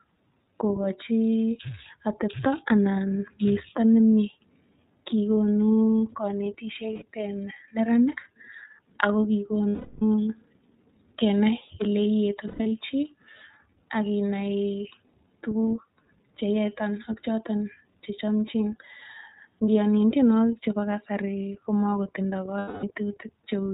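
Speech coded throughout with the iLBC codec, with damage that is plainly audible. Nothing passes above 4 kHz, so a spectrogram shows an empty band from there up. The voice has a rough, slightly synthetic edge. The sound suggests a rate near 13.3 kbps with 30 ms frames, each coded on its own excitation. Lost iLBC frames interrupt it four times. At 6.93 to 7.05 s, just before "en neranik", about 90 ms is lost. The other losses are at 9.69 to 10.02 s (330 ms), 12.48 to 12.72 s (180 ms in pieces spread over 240 ms, with the longest run around a tenth of a second), and 22.59 to 22.84 s (240 ms). In each gap the decoder repeats the last pitch cycle mixed with noise, which sounds like a held, buzzy or breathy vowel. On a spectrogram these gaps appear as flat, smeared harmonic stripes, and the waveform shows a repeating cycle. The longest gap fades toward silence, and the voice recovers almost at once afterward.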